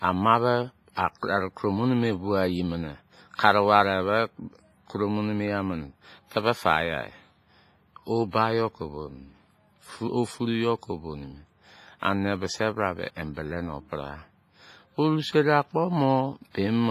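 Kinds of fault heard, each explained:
WMA compression: Heard throughout, the speech has a washy, ringing quality with hiss that swells and fades along with the voice, and nothing above 15.5 kHz. This is likely a long-block transform codec like WMA, at a low bitrate near 24 kbps.
pre-echo: At 3.35 to 3.39 s, a short hiss runs for about 38 ms before a sharp attack, softening its onset. The codec spread noise meant for the loud attack across its whole block, so it also fills the quiet moment beforehand.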